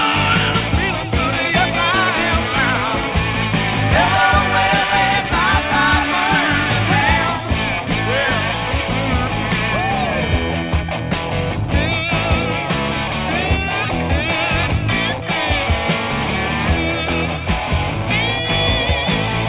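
No technical faults can be heard in this audio.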